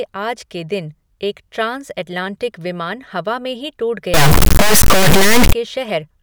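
A stuck bit runs from 4.14 to 5.53 s, starting just after "ही टूट". Across that stretch the speech turns harsh and buzzy. The likely cause is a single data bit held at a fixed value by a broken line or converter, so roughly half the samples are pushed off by that bit's weight. Here the error step sits only about 5 dB below full scale, a high-order bit.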